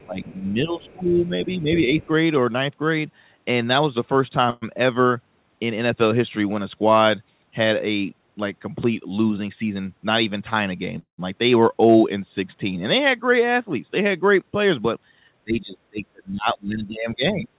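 From 0.05 to 2.08 s the speech dips by up to about 15 dB and thins in places. This is speech suppressed in double talk. The echo canceller likely turned both voices down together.

Around that stretch, at 0.0, 0.83 and 2.01 s, faint scraps of a second voice surface, about 30 dB below the speech. This is the other side's voice leaking through, likely from echo the canceller left behind.

At 4.50 s a call audio freeze stretches the last sound into a fading buzz for about 0.12 s. The jitter buffer likely ran empty. Speech then resumes where it stopped.

From 9.48 to 10.56 s a jitter buffer speed-up runs the speech 10% fast at unchanged pitch. It sounds hurried.

A second freeze at 10.99 s lasts about 0.19 s. It includes 120 ms of silence, likely from a longer packet delay.

From 11.83 to 11.96 s light hard clipping flattens the peaks, overdriven by about 1 dB. It adds a faint crackle.

From 14.42 to 14.98 s another speed-up runs 8% fast, again without a pitch change.

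From 15.44 to 17.53 s double-talk suppression returns. The speech drops by up to about 25 dB, likely while the far side was talking.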